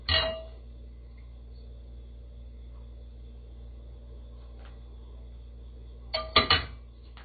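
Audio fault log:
Throughout, MP3 compression: nothing gets through above about 4.6 kHz, so these sounds come across dull and boxed-in, with plainly audible smeary, swirly artefacts on top. That's likely a heavily starved MP3 encode, and the damage fits a very low bitrate, around 24 kbps. With so few bits, the encoder chops off the top band outright and keeps dropping weaker frequency detail from one frame to the next, which gives that unstable, watery texture.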